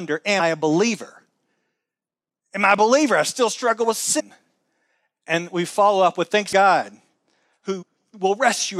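At 0.39 s, just before "a believer", the speech jumps ahead by something like 150 ms: compressed frames skipped. Whole frames were never decoded, so the sound lurches forward. The same happens at 2.78 s between "I a" and "I still struggle with" (a very small jump), at 4.19–4.21 s after "I still struggle with" (about 200 ms), at 5.25 s (tiny), at 6.52 s (about 300 ms), and at 7.81–7.83 s (about 100 ms).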